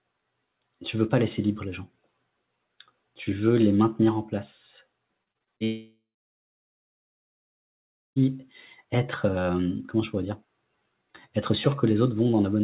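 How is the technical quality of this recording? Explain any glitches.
The recording has two network faults close together, one running straight into the other. The whole clip has no content above 4 kHz, which fits a narrowband call codec such as G.711 mu-law at 64 kbps.

Repeated packet loss (robotic sound) runs from 5.24 to 5.62 s. Six short holes, the longest about 27 ms, were each patched by extending the preceding sound, so about a third of that span is concealment standing in for roughly 120 ms of missing audio. Because the holes are brief and recur quickly, the sound breaks into a choppy stutter instead of stopping. That distinguishes it from the single long gap that follows.

A long network dropout follows at 5.64 s and lasts until 8.22 s. It was likely caused by the stream stopping entirely for about 2.5 s. The receiver briefly carries the last sound forward, but that fill decays, and about 2.1 s of the stretch is silence. 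When audio resumes at 8.22 s, the lost portion is simply absent. Unlike the stutter before it, this is one sustained hole that empties out, not a rapid run of small patches.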